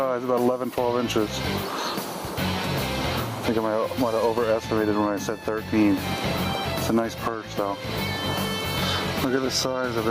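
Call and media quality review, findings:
Gain pumping, throughout the clip. Level swing around 15 dB. Loud and soft parts squashed toward one level. Likely cause: input gain set far too high for the microphone, with a fast limiter or compressor clamping down on each peak and releasing in the pauses.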